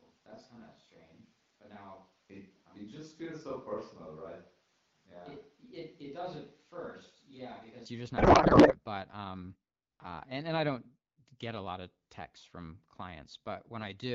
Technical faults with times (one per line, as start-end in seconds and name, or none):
0.00-7.86 switch to a distant microphone
8.17-8.77 codec payload misread